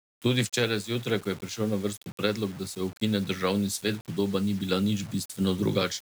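From start to finish, the speech carries a grainy, rasping distortion that shifts with the level and shape of the sound, the mark of low bit depth without dither. The likely cause is requantisation to about 6 bits by plain rounding, leaving an error that tracks the signal instead of spreading as a steady hiss. The error sits roughly 25 dB below the signal, so softer passages turn gritty and the quietest tails collapse toward silence or sputter between adjacent steps.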